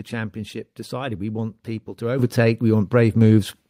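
At 2.19 s, just after "want people to", the call software judged the microphone too quiet and raised its input volume in one step, a microphone volume stepped up fault. The speech and the background noise jump together by about 9 dB, mid-phrase.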